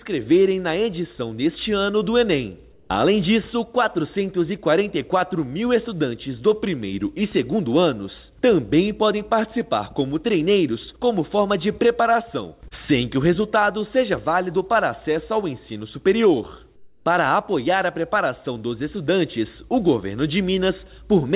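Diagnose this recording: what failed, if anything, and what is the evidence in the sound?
Comfort noise in place of the background, in call processing: at 2.72 to 2.9 s and 16.76 to 17.06 s the real background gives way to steady, featureless hiss, about 4 dB and about 7 dB quieter. This is likely discontinuous transmission with synthetic fill. Unlike a noise gate, the pause never goes silent.

Onset clipped by the voice detector, also in call processing: the sound resuming at 2.85 s lacks its first 50 ms and starts abruptly out of that synthetic hiss. The detector likely reacted late. An edit or fade-in would not leave comfort noise where the attack should be.

Short concealed packet loss, at the network and jitter-buffer stage: around 12.68 to 12.74 s, 30 ms of audio never arrived, and 25 ms was bridged by extending the preceding sound, heard as a brief smear. A plain dropout would leave a gap or click rather than this continuation. 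The G.711 path's cut-off at 4 kHz is present throughout.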